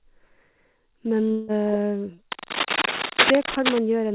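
From 1.31 to 1.52 s the speech gives way to a fading buzz, with no gap of silence, likely a long network dropout. On a spectrogram, smeared, decaying bands replace the lost stretch, and the speech resumes without it.

From 2.32 to 3.79 s, dense, irregular scratching about as loud as the speech rides over it, likely cable scratch noise from a poor contact. On a spectrogram it shows as ragged broadband bursts within the band, which stops at 4 kHz.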